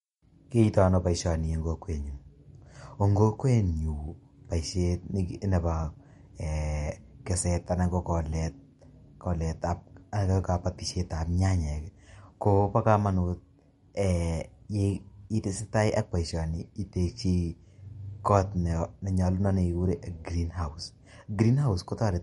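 From start to finish the speech has a watery, swirling texture, and nothing is present above 11.2 kHz, so sibilants sound dull and chirpy. This is most likely MP3 compression with plainly audible damage. Short of bits, the encoder removed everything above that fixed cut-off and zeroed weak frequency lines, which flicker in and out from frame to frame. The sound fits a low bitrate of about 49 kbps.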